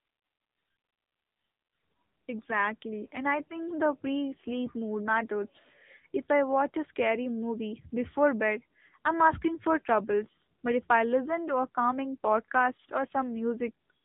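Speech squeezed through the AMR narrowband mobile codec for its whole length: nothing passes above 3.8 kHz, and the plainly buzzy, synthetic texture points to a low AMR-NB mode near 8 kbps. A spectrogram shows a flat ceiling at that cutoff, with smeared harmonics beneath.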